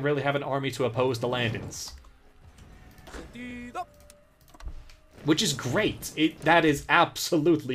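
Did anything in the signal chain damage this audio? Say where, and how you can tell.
Yes: short clicks at 1.78 s and 3.51 s, each an 11.6 ms slice heard twice. This is a repeated buffer at the driver stage, consistent with a 512-sample buffer.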